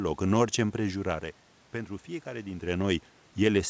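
No technical faults are audible.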